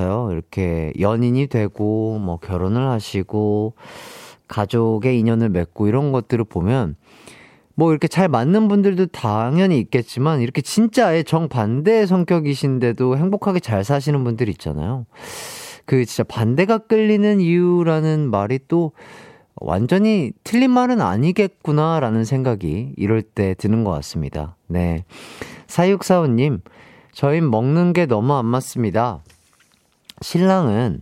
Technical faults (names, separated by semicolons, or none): drift correction step